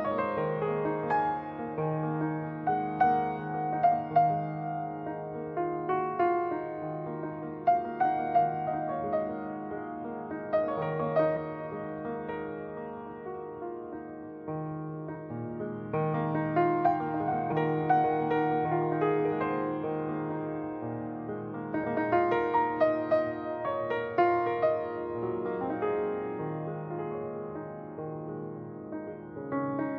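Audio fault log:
8.66, 11.36, 15.14, 17.51, 21.83 s: compressed frames skipped. The playback jumps ahead at each point, losing about one frame (some 20 ms) at 8.66 and 21.83 s, about two frames (some 50 ms) at 11.36 and 15.14 s, and about seven frames (some 150 ms) at 17.51 s, with 23.2 ms frames. On a spectrogram, each one shows as a sudden shift in the pattern with a brief vertical smudge. On the waveform, the envelope is misaligned at each seam.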